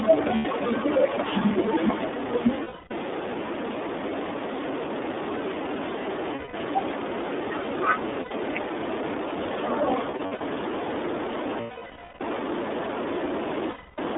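The whole clip passes through the iLBC codec, which fits its 30 ms frame mode. Each frame is coded on its own and the line is cut to about 250 Hz to 3.6 kHz, so the speech sounds plainly narrowband, rough and slightly synthetic.

Lost iLBC frames occur at 0.35 s (90 ms), 2.63 s (270 ms), 6.35 s (180 ms), 8.21 s (90 ms), 10.11 s, 11.6 s (600 ms) and 13.71 s (270 ms). At 10.11 s the losses are scattered over 300 ms, with the longest run well under a tenth of a second. Each time, the decoder fills the gap by repeating the last pitch cycle mixed with noise. This gives a held, buzzy or breathy vowel that fades during the 600 ms gap, and the voice returns almost at once after each loss.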